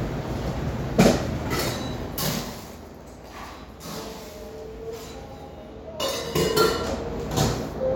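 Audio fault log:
No technical faults are detectable: the signal's continuity and tonal balance hold steady across the recording of everyday sounds.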